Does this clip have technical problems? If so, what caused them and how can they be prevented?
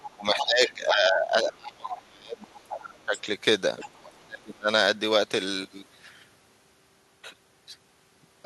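Yes. The other side's voice leaks through at 0.0–0.73 s, 1.91–2.01 s, 2.41–3.21 s and 3.79–4.25 s, about 10 to 20 dB below the talker. This is likely a loudspeaker echo the canceller failed to remove. A spectrogram shows faint, separate harmonic traces under the speech. Headphones or a better-converged echo canceller would prevent it.

Speech is suppressed in double talk at 0.16–2.67 s, 3.04–3.27 s and 3.98–4.69 s. The voice drops by up to about 30 dB, most likely because the canceller turned everything down while both sides spoke. The waveform shows dips where the voice is turned down. A full-duplex echo canceller with proper double-talk detection would prevent this.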